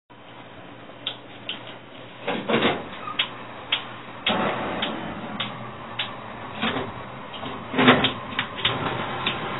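From start to end the sound is band-limited, with nothing above about 3.9 kHz, and sounds dull, smeared and warbling: heavy damage, likely from AAC compression at a very low bitrate, around 18 kbps, where sparse quantisation leaves holes in the spectrum.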